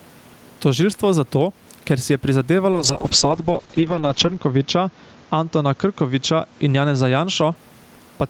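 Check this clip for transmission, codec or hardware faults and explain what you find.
Two faults are present in this speech clip: gain pumping throughout, and a call bitrate drop in the middle.

Gain pumping runs through the whole clip. The likely cause is input gain set far too high for the microphone, with a fast limiter or compressor clamping down on each loud syllable. The level swings by around 10 dB. The room noise sits about 36 dB below the speech. The result is a squashed, breathing sound.

A call bitrate drop starts at 2.73 s, right after "zato ker si je", and lasts until 7.61 s. The encoder's budget fell from 32 kbps to 7 kbps after the bandwidth estimate collapsed, and it stayed at the lowest rate for about 1.7 s. At that rate Opus quantises coarsely and narrows the band from 20 kHz to 8 kHz. The speech loses its air and turns rough, watery or muffled until the rate recovers.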